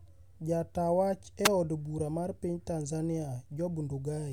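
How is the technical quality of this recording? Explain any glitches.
The speech has one glitch. From 1.44 to 1.48 s, just before "eod bura mar piny", there is a wireless microphone noise hit. The FM radio signal faded as reflections cancelled. Receiver noise rose and broke through as a brief swish of static.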